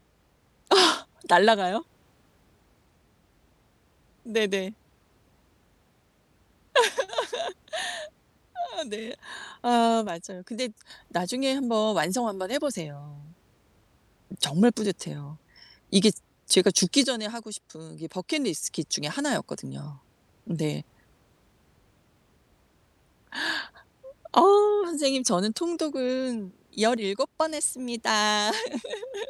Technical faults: one channel drops out

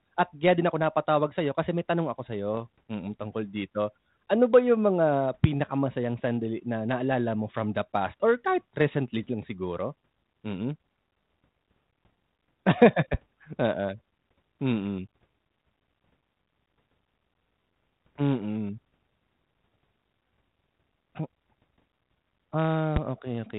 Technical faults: bit errors on an ADPCM link; loud pop

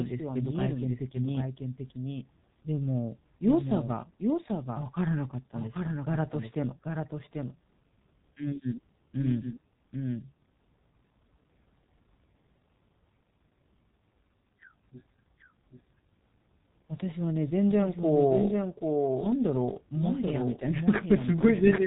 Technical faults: doubled audio track; G.723.1 codec

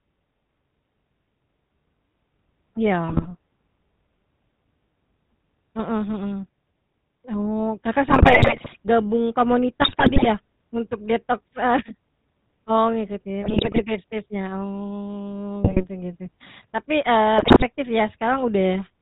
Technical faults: GSM full-rate codec; GSM bit errors

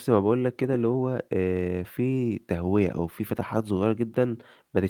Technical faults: clock drift between sender and receiver; repeated timing corrections

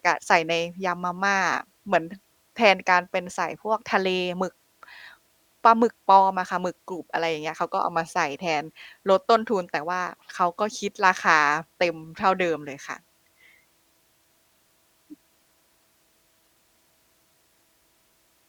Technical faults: none

